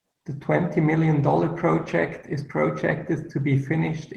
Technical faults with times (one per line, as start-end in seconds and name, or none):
0.00-4.16 Opus voice compression